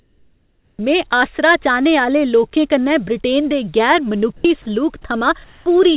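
Speech clip, heard through a call path with nothing above 4 kHz, which fits a narrowband G.711 link. From 0.00 to 0.79 s, just before "में आसरा चाह्ने", the room background gives way to a steady, featureless hiss about 1 dB quieter, with the detail of the real ambience gone. The same thing happens from 5.44 to 5.66 s, about 2 dB down. This is likely comfort noise in place of the background, which the receiver synthesises while the sender pauses transmission. From 4.37 to 4.45 s, about 70 ms of sound is lost, likely sound dropped by the voice detector after it mistook that sound for background.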